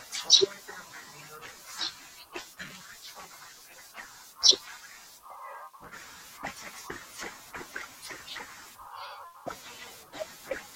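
From 9.34 to 10.22 s, five CD scratch ticks recur at a steady rate of about six per second. Each time the damaged spot passes, the player patches or mutes samples it cannot recover, leaving a click, the longest about a millisecond. Their even, rotation-locked spacing separates them from random digital clicks.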